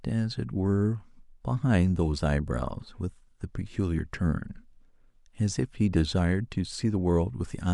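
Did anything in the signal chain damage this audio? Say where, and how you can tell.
No, nothing in the signal chain damaged this speech recording. No stage in the path leaves any audible mark on the sound.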